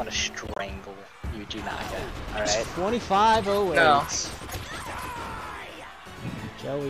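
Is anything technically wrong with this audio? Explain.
Yes. Three bursts of corrupt frame decoding occur, at 0.47 to 0.62 s, 2.32 to 2.48 s, and briefly at 4.52 to 4.55 s. The first two span several consecutive compressed frames and the third looks like a single frame. Damaged bits led the decoder to apply wrong gains and misread spectral codes, placing energy at false frequencies. Each event is a chirpy, noisy blip peaking around -15 dBFS in the first burst and around -20 dBFS in the later two.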